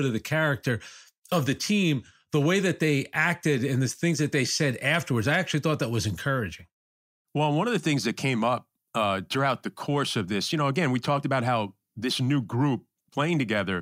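No technical faults are audible.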